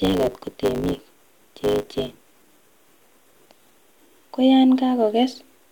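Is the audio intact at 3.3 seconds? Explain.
No, at 3.3 seconds the speech is still inside a truncating block size mismatch running from 0 to about 3.82 s. Each block, which fits a 512-sample write, has its tail cut off, so there's a 100 Hz buzz and everything plays about 1.16 times fast at roughly normal pitch.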